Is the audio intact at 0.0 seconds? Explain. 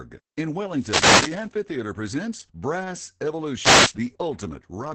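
No. At 0.0 seconds the speech already carries Opus voice compression, and it stays that way to the end. Nothing is heard above about 8.6 kHz, so the top of the band is simply gone. The coder models the voice with linear prediction and codes its excitation coarsely. That leaves the speech muffled, hoarse and slightly robotic. The damage is heavy. The sound points to the SILK voice mode at roughly 10 kbps, with 20 ms frames.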